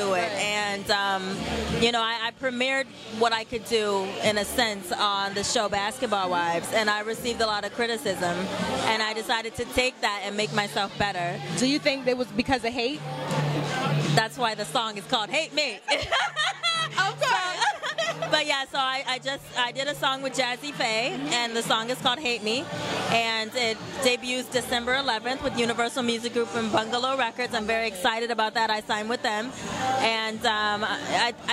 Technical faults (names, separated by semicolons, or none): none